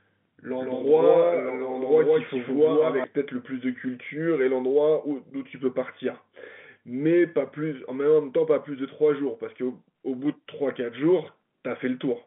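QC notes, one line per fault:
0.0–3.04 s, doubled audio track: the sound arrives twice, a second full-band copy about as loud as the first and roughly 150 ms behind, likely from a second, slower capture path. The waveform shows each burst repeated, the spectrogram shows stacked echoes without decay, and the copy stops abruptly at 3.04 s.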